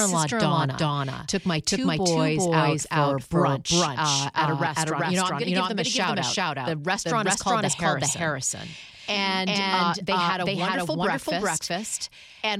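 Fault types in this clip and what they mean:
Doubled audio track: the speech plays twice, a dry copy trailing about 0.4 s behind at roughly equal level, likely from a second capture path.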